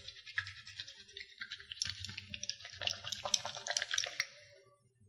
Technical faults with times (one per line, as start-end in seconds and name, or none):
0.00-5.09 resampler restarted on every block